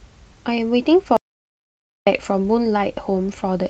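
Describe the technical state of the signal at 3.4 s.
At 3.4 s the signal is intact, with no audible fault at that moment.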